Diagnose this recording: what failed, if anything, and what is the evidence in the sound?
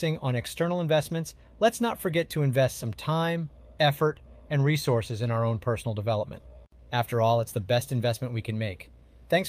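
Nothing failed; no fault is audible in the recording.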